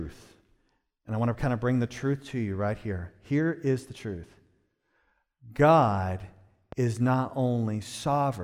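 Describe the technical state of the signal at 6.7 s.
At 6.72 to 6.75 s a single loud pop sits on top of the speech, peaking a few decibels above it and lasting under 30 ms. It is likely a voltage step or spike from a plug, switch or static discharge entering the chain, shaped by the circuits that follow. The speech carries straight on underneath with no gap, which separates it from a dropout.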